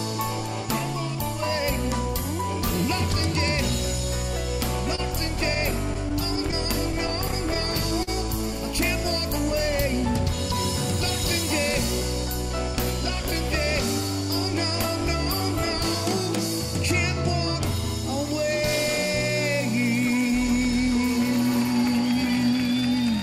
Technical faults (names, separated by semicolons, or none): scattered short gaps